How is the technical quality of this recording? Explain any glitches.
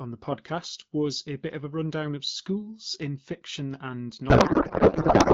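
The recording carries AMR wideband (HD Voice) coding with light codec texture, consistent with a rate around 12.65 kbit/s, and one serious glitch near the end.

From 4.29 s, right after "schools in fiction and", to the end at 5.34 s, there is a codec payload misread. The speech is replaced by garbled noise and warble that barely tracks it. The sound points to the sender packing AMR frames octet-aligned while the receiver unpacks them as bandwidth-efficient. Each field is then read from the wrong bit positions, yielding plausible but meaningless frames. Packet loss would instead leave short gaps or smeared repeats. Here the garble is continuous and does not recover.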